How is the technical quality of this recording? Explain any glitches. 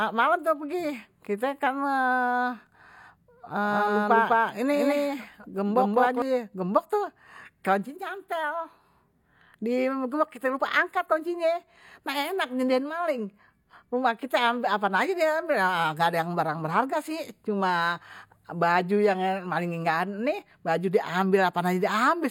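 One glitch affects the speech. From 3.64 to 6.22 s there is a doubled audio track: a second copy trails by about a fifth of a second at roughly equal level, likely from a slower duplicate capture path. Unlike an echo, it has no decay or room colour and cuts in and out abruptly.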